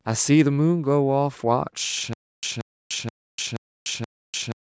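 At 2.13 s the speech falls into a stutter with silent gaps that runs to the end: a 180 ms fragment replays five times, each followed by about 297 ms of digital silence, so it returns every 477 ms. The likely cause is a stalled stream retrying its last buffer, and the audio for that stretch is lost. On a waveform it shows as identical blocks separated by flat silent stretches. A spectrogram shows repeated identical patches between fully empty columns, with content stopping at 8 kHz from the call processing.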